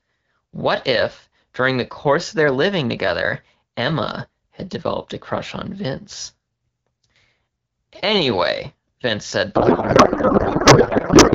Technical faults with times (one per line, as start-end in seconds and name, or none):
9.55-11.34 codec payload misread